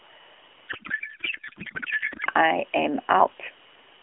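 From 0.68 to 2.26 s, a codec payload misread turns the speech into garbled warble, which fits octet-aligned AMR frames decoded as bandwidth-efficient. The spectrogram shows formant striations replaced by smeared, structureless energy.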